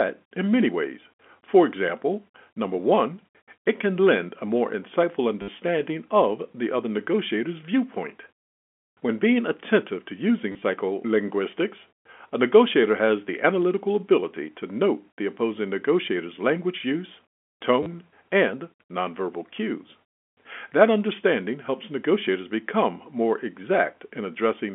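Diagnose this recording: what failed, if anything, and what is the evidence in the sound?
The network stage failed, causing packet loss with the last packet repeated. Short robotic stutters occur at 5.42 to 5.48 s (60 ms), 10.52 to 10.62 s (60 ms lost in scattered runs up to 30 ms), and 17.83 to 17.86 s (30 ms). The receiver replayed the last packet instead of the missing ones. The buzz fits 10 ms packets, about 100 Hz. A spectrogram shows vertical click lines at 10 ms spacing and smeared harmonics. The waveform shows one segment copied several times in a row. The band stays within the 200 to 3400 Hz telephone line carried by G.711.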